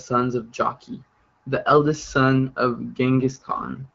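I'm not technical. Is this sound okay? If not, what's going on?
No. Near the end, from about 3.18 s, right after "the eldest son of", the voice turns rougher and more synthetic and stays that way until the clip finishes. This is an AMR rate drop: the phone network switched the HD Voice codec to a lower-quality mode, likely because the radio link weakened, so less detail of the voice gets through. Nothing cuts out, and the tone stays just as full; only the clarity drops.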